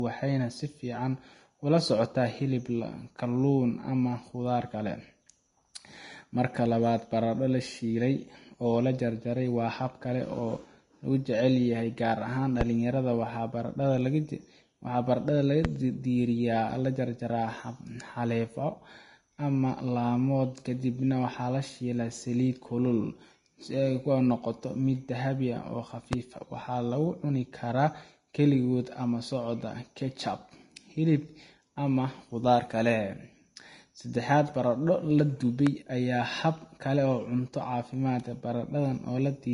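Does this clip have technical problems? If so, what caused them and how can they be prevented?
Yes. The speech was likely encoded with Vorbis at a low bitrate, around 32 kbps, which makes this Vorbis compression plainly audible. Nothing remains above 10.5 kHz, and the coarsely quantised upper range turns to grainy hiss, roughening the tone and softening consonant attacks. Encoding at a higher quality setting, or keeping an uncompressed master, prevents this.

A loud pop occurs four times, at 12.61, 15.65, 26.13 and 35.67 s. Each is a single sharp burst lasting about 30 ms, most likely from a sudden voltage step such as a connector, switch, static discharge or driver glitch. The first three stand roughly 20 dB above the speech and the last about 15 dB, while the speech carries on beneath them. Secure cabling, grounded equipment and stable audio drivers prevent these pops.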